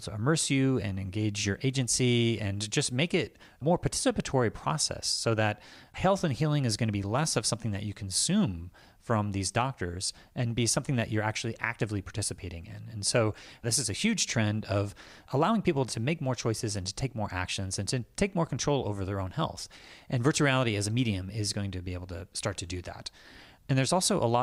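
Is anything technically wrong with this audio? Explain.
No, there is nothing technically wrong with this audio that can be heard.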